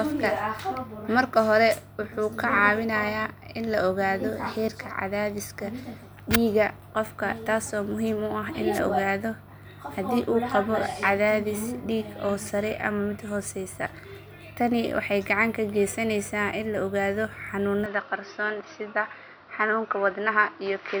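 At 8.73 to 8.80 s the radio link of an analogue FM wireless microphone fades as reflected paths cancel, and receiver noise rises for a moment. The result is a wireless microphone noise hit, a brief swish of static laid over the speech.

From 17.86 s to the end, the input has likely switched to a poorer device, with no gap at the switch. The speech suddenly turns duller, with nothing above 5.9 kHz, a new noise floor roughly 35 dB below it, and its level unchanged.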